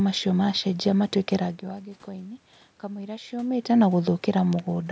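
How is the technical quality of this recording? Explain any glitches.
No glitches: the level changes near 1.5 s and 3.5 s come from the talker moving relative to the microphone, the background noise belongs to the room, and the absence of content above 8 kHz fits the call's microphone processing.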